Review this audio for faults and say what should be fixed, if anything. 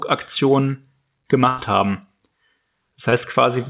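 There's a burst of packet loss from 1.48 to 1.60 s: about 100 ms never arrived, so the receiver stretched the last sound and faded it before jumping ahead. A deeper jitter buffer or redundancy such as FEC would ride out a gap like that.

Short concealed packet loss hits at 3.10 to 3.14 s, where roughly 20 ms went missing and got patched with a continuation, leaving a quick smear. Steadier network delivery or forward error correction would stop this one too.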